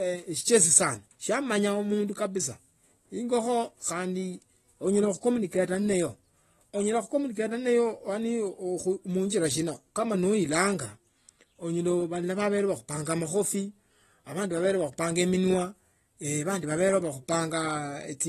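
Speech that sounds dull and smeared throughout, with nothing above 12.4 kHz and a fizzy, warbling texture, likely from AAC compression at a low bitrate around 32 kbps.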